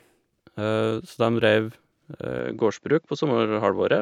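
Speech, and from 2.39 s to the end the sound abruptly loses everything above 7.6 kHz and picks up a faint new background noise, with no gap and no level jump. The likely cause is an input switched to a poorer device. The new noise floor sets it apart from a simple bandwidth cut.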